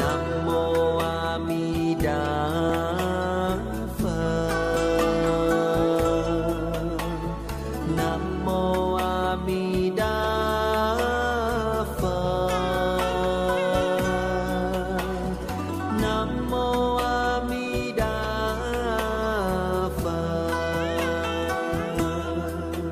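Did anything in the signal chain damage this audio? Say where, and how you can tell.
Yes, at the streaming stage: a tiny skip at 2.70 s is an overlap between stream segments. Overlapping 4 s segment timestamps got trimmed, dropping about 16 ms and jumping the waveform.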